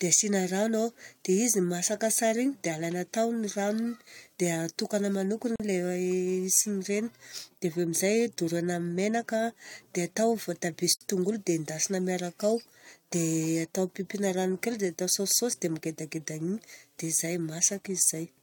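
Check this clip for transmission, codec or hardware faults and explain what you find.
Two short dropouts interrupt the speech, both from a gap at a join of encoded pieces. At 5.56 to 5.60 s the sound drops out for about 41 ms, and at 10.95 to 11.01 s for about 54 ms. The edges are smeared by the codec, and the speech resumes where it stopped. Each gap comes from pieces encoded separately and joined without trimming, leaving the encoder's start-up delay and final-frame padding in place.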